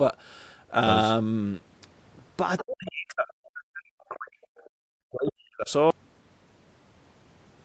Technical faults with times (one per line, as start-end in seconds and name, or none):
2.58-2.62 other side's voice leaking through
2.61-4.36 speech suppressed in double talk
4.42-4.70 other side's voice leaking through
4.94-5.70 speech suppressed in double talk
5.27-5.32 other side's voice leaking through
5.90-7.65 audio dropout to silence